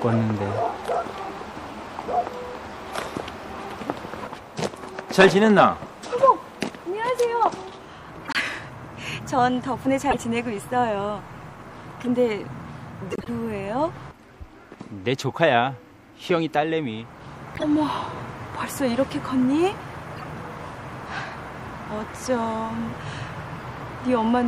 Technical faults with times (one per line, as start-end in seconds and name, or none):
0.00-24.48 MP3 compression
8.25-8.37 corrupt frame decoded
10.10-10.19 corrupt frame decoded
12.00-12.09 corrupt frame decoded
13.11-13.29 corrupt frame decoded
17.55-17.64 corrupt frame decoded
20.16-20.24 corrupt frame decoded